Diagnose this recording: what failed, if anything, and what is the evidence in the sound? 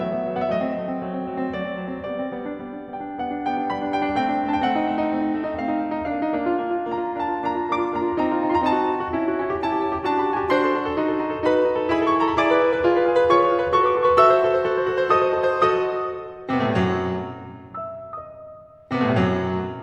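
Nothing failed; no faults found.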